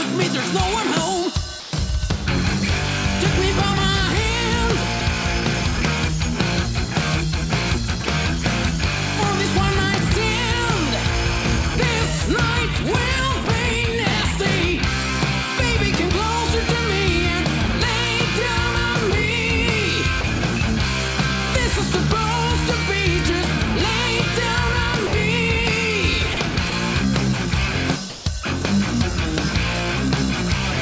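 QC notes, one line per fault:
1.60–1.73 s, 13.46 s, 19.11 s, 20.21–20.24 s, 25.07–25.13 s, 28.10–28.26 s, sound dropped by the voice detector: the sender's voice activity detector likely misjudged the sound as background and stopped transmitting, so the receiver filled each gap with comfort noise. The sound briefly gives way to a steady synthetic hiss before returning. The gaps last 130 ms, 10 ms, 10 ms, 30 ms, 60 ms and 160 ms.
5.00–5.23 s, 26.34–26.72 s, sound chopped by the voice detector: the detector likely flipped between sending and muting more than once within each stretch, and comfort noise filled the muted moments. That replaced about 20 ms in the first stretch and about 50 ms in the second. The sound turns choppy, with quiet edges clipped away, and the generated fill is band-limited to 8 kHz like the rest of the call audio.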